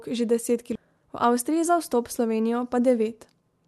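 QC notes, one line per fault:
0.75–0.77 s, skip ahead: about 0.7 s of speech is missing, and playback jumps straight to later audio that was already queued. The seam is audible as an abrupt splice. On the waveform and spectrogram, the envelope and harmonic tracks break sharply with no silent gap.
0.85–1.70 s, jitter buffer speed-up: the receiver had too much audio queued, so it trimmed out pitch-period-sized pieces, about a tenth of a second in total. Speech runs at 111% speed with unchanged pitch and sounds hurried. On the spectrogram, the harmonic spacing holds while syllables look compressed in time.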